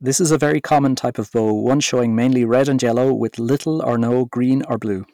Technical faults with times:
0.00-5.13 hard clipping

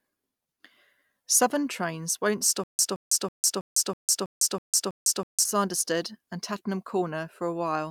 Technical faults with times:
2.64-5.45 stutter with silent gaps

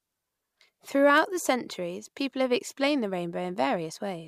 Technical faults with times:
1.18 electrical switching spike

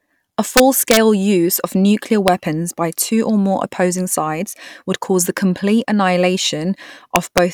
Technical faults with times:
0.57-0.97 integer overflow
2.28 integer overflow
7.16-7.38 integer overflow

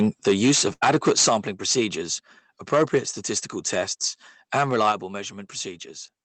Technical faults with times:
0.00-1.37 microphone overload
0.73-0.83 burst of packet loss
1.29 microphone volume stepped down
1.69-1.84 microphone overload
4.54-4.92 microphone overload
4.92 microphone volume stepped down

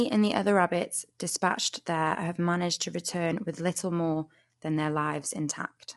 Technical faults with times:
0.00-5.97 low-delay AAC compression

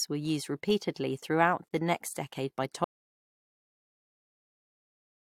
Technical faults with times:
1.68-1.71 gap between stream segments
2.84-5.33 audio dropout to silence

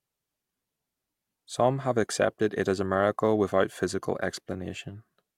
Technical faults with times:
none

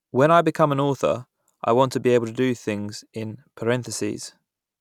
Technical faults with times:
none

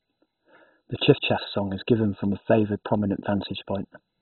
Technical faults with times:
0.00-4.22 MP2 compression

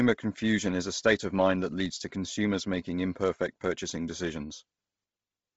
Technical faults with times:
0.00-5.56 Bluetooth LC3 compression

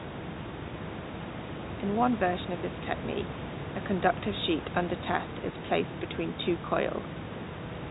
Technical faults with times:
none

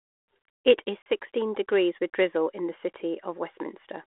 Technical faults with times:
1.02-1.06 packet loss on an ADPCM call

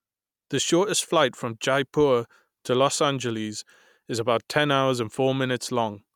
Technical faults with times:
none

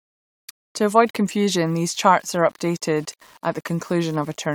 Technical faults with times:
0.00-4.54 low bit depth without dither

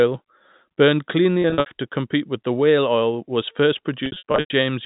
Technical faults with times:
1.42-1.66 packet loss with pitch repetition
4.06-4.50 packet loss with pitch repetition

